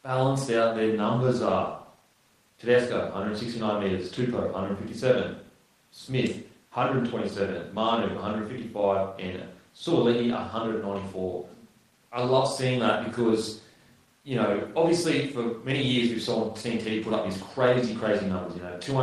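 No technical faults are audible.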